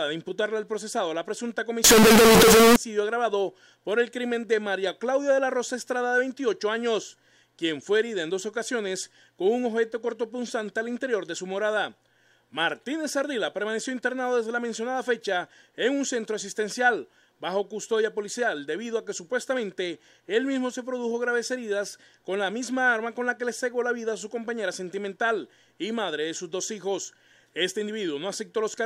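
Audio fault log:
1.84 to 2.76 s, float read as integer: the sound suddenly turns into a harsh, very loud, almost square-edged blast sitting at an almost fixed, high level, with the background noise as loud as everything else. The likely cause is 32-bit float samples being interpreted as 32-bit integers.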